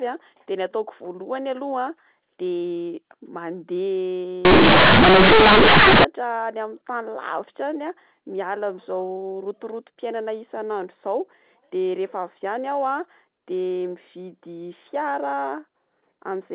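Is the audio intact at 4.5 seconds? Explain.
No. From 4.45 to 6.04 s the speech is hit by companded audio read as linear. The A-law bytes of the G.711 telephone coding are played as plain 8-bit samples without expansion, so the logarithmic scale is lost. Every sign change swings the output across about half its range, and quiet passages come out as large as loud ones. The result is a harsh, very loud buzzy distortion with heavy noise filling the pauses.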